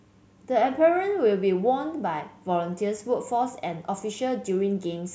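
Nothing in this speech recording stands out as a technical fault; it just runs along without any glitch or interruption worth pointing to.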